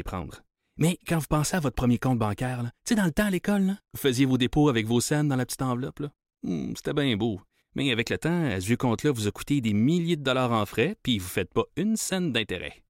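No technical faults can be heard anywhere here.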